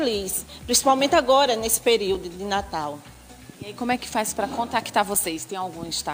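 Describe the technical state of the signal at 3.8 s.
At 3.8 s the signal sits inside a run of periodic USB or driver dropouts, spanning 2.15 to 5.15 s. Every 1.0 s, a few milliseconds vanish into silence, leaving regular ticks.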